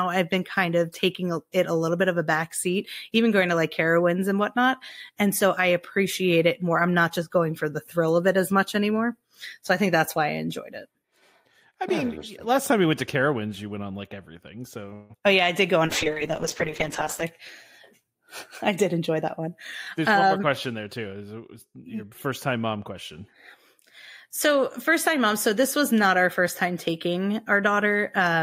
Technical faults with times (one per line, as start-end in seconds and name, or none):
14.93-15.12 call audio freeze
15.86-17.30 call bitrate drop
18.76-19.48 jitter buffer speed-up
19.98-21.07 jitter buffer speed-up